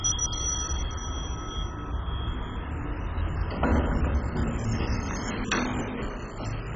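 An everyday sound recording, dull throughout with nothing above 7.5 kHz, and a gurgling, granular roughness as upper sub-bands flicker in and out. Unlike a clean low-pass, the remaining bands are coarsely quantised, so it is likely heavy MP2 compression at a very low rate.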